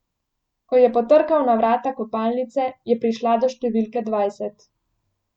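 Listening to the speech recording, nothing stood out as a technical problem at any point.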